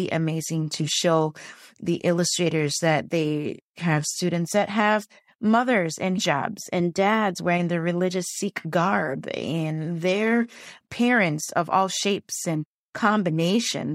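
Speech recording with no audible technical faults anywhere in the clip.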